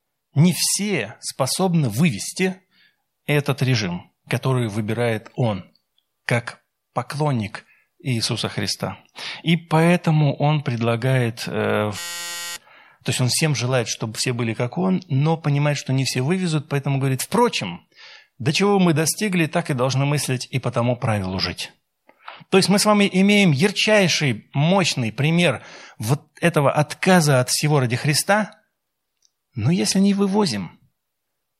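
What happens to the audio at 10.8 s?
Nothing goes wrong at 10.8 s; the speech carries on intact through that moment.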